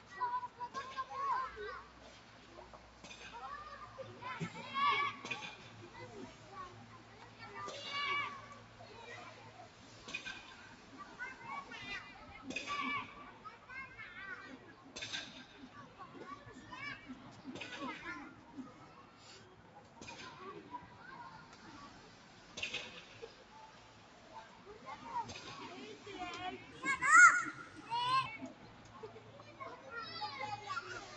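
A speech-tuned noise suppressor was left running on this recording of everyday sounds, and it treats steady tones, ambience and decaying tails as noise. Across the whole clip its gain swings by roughly 10 dB as it decides what to keep. Sharp onsets pass through, but held sounds and their tails are pushed down, so the audio pumps and thins instead of sustaining naturally.

Sound was cut by the noise suppressor at several points where it judged specific passages to be noise and pulled them down harder than the surrounding material: 0.0 to 0.6 s, 1.83 to 3.95 s, 6.35 to 7.4 s, 8.6 to 10.93 s, 18.39 to 19.97 s and 28.54 to 29.55 s. The deepest dips reach about 4 dB. Within each stretch only parts are affected, from a fraction of a second up to about a second in total. Steady or fading sounds sag or have their decays clipped short.

From 26.72 to 28.26 s there is a section at the wrong speed, running 1.18 times faster than normal. 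This is likely the result of that stretch being played against a mismatched clock. Speed and pitch rise together, lifting the sound by about three semitones and making it hurried and brighter, before it returns to normal pace.

The call microphone processing, which takes out the lowest bass, is working as expected.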